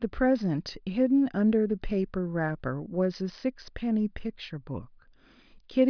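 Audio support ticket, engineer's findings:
No faults found on listening; no dropouts, clipping, distortion or timing errors audible anywhere in the speech.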